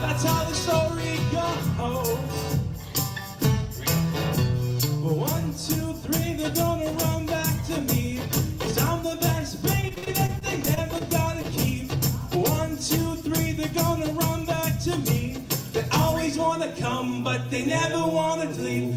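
The audio has two network-related faults. From 9.81 to 11.02 s there is repeated packet loss (robotic sound): around ten short holes, the longest about 45 ms, each patched by extending the preceding sound. Roughly 17 percent of that stretch is concealment, which gives it a choppy texture with fragments missing. From 13.59 to 14.80 s a jitter buffer speed-up follows. The receiver trims short pitch-period slices to shed excess buffered delay, removing a few tens of milliseconds in total. Playback runs at about 103 percent speed with unchanged pitch.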